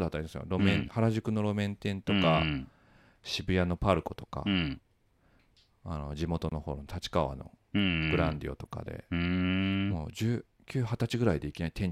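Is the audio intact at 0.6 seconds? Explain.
Yes, the audio is intact at 0.6 seconds, with no audible fault at that moment.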